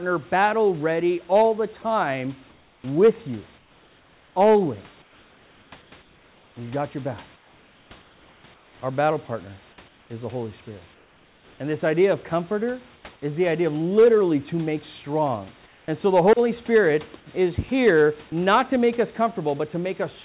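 Comfort noise in place of the background fills the pauses at 2.5 to 6.56 s, 7.36 to 8.82 s, 9.88 to 10.1 s, 10.94 to 11.6 s, 12.96 to 13.04 s and 15.66 to 15.88 s. The room's textured hiss turns flat and featureless and, in the last four pauses, drops by about 2 to 4 dB. This is likely discontinuous transmission, with the receiver synthesizing noise. Unlike a dropout, the gap is never silent.

Sound dropped by the voice detector occurs at 18.30 to 18.32 s. About 10 ms of the speech itself gives way to the same steady synthetic noise. The likely cause is the detector briefly mistaking the sound for background. Here speech is lost, not merely background replaced.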